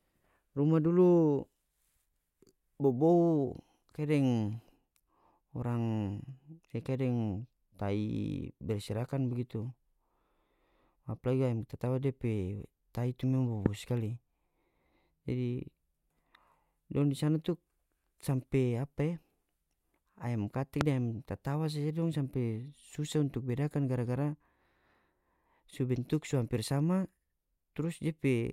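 A sharp loud pop cuts through the speech at 13.66–13.68 s, just before "bobou skali", and another at 20.81–20.83 s, just before "deng ayam tatawa saja". Each is a single click roughly 20 dB above the speech, likely a brief voltage spike from a switch, plug or static discharge.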